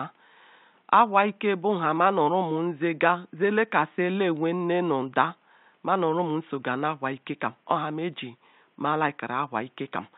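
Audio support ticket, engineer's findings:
Nothing to chase on this speech clip: no system faults turned up, just some room noise sitting about 43 dB under the speech, which belongs to the recording itself.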